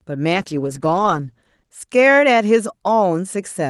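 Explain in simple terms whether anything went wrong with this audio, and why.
A call bitrate drop happened from about 0.34 to 1.83 seconds into this speech clip. The connection briefly seemed too weak, so the call's Opus codec was told to squeeze the sound into far less data, staying at its lowest level for about 1.4 seconds. With so little room, the sound is stored more crudely, so that stretch sounds rougher and more smeared, then returns to its earlier clarity once the data rate recovers.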